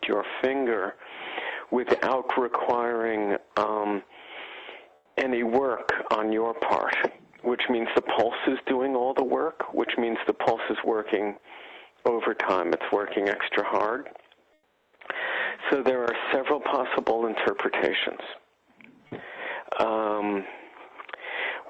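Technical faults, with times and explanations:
4.95–5.15 s and 14.53–14.99 s, comfort noise in place of the background: for 200 ms and then 460 ms, the quiet background, about 34 and 41 dB below the loud parts, gives way to a smooth, featureless hiss about 6 and 7 dB quieter. This is likely Opus discontinuous transmission, where the receiver synthesises noise while the sender pauses. Unlike a dropout or noise gate, the gap is never silent. Unlike packet-loss concealment, nothing is repeated or smeared.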